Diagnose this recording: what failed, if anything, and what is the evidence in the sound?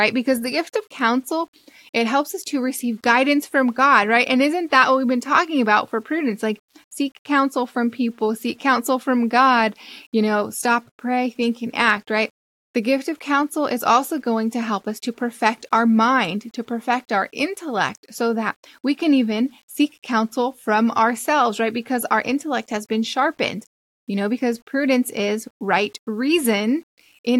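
Low bit depth without dither, throughout: quiet speech turns gritty, with error about 40 dB down, likely undithered rounding to 9 bits during sample-format conversion.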